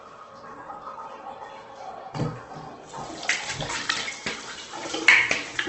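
From start to finish the sound is grainy and rough, tones smeared into noise, with heavy Opus compression as the likely cause; the damage fits a low bitrate near 12 kbps. A spectrogram shows nothing above 8.2 kHz, and filled bands appear as speckled noise.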